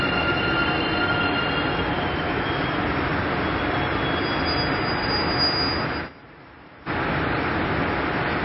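From the start and throughout, the audio is dull and watery, with nothing above 5.5 kHz and a swirling, unstable texture on the quieter detail. This is likely MP3 compression at a very low bitrate, around 23 kbps, where the encoder cuts the treble and drops weak frequency components frame by frame.

From 5.72 s to 6.97 s a loudspeaker feedback squeal appears. It is a single tone at 6.4 kHz that swells over a little under half a second to about 5 dB above the rest of the sound. A microphone is picking up its own loudspeaker, and at that frequency the loop gain exceeds one, so the tone keeps feeding itself until the amplifier limits it or the loop is broken.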